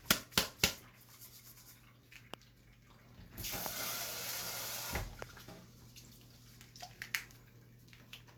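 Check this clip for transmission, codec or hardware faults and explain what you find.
Three loud pops stand out, at 2.34 to 2.36 s, 3.66 to 3.68 s and 5.22 to 5.24 s. Each is a single sharp crack lasting about 20 ms and peaking roughly 20 dB above the surrounding sound, which continues unbroken beneath it. The likely cause is a brief voltage spike, from a switch, static discharge or driver glitch, added to the signal and shaped by the following circuitry into a short, hard transient.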